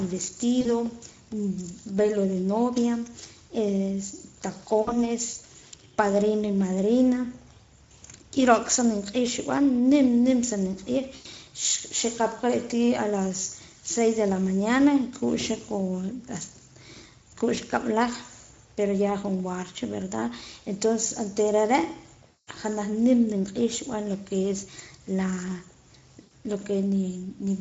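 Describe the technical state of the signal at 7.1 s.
At 7.1 s the speech sounds hoarse and grainy, with a rough noisy edge on every syllable. This is Speex codec damage, present throughout the clip: the CELP coder has too few bits to model the excitation, and the roughness fits a setting near 16.8 kbps.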